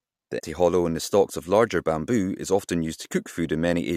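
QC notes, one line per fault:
0.38–0.40 s, damaged data in a compressed stream: corrupted frames are misdecoded, giving a brief glitch before "hollow in the stalks".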